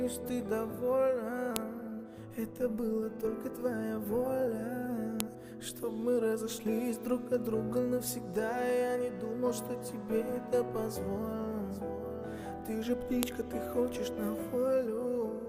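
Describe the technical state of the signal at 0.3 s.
At 0.3 s the signal is intact, with no fault to be heard at that moment.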